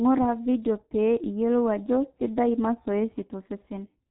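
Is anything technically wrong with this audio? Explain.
Yes. Throughout, the speech runs through the G.723.1 codec. Everything above 3.9 kHz is gone and its slow 30 ms frame modelling, which fits a bitrate around 6.3 kbit/s, leaves it muffled, hoarse, consonants smeared.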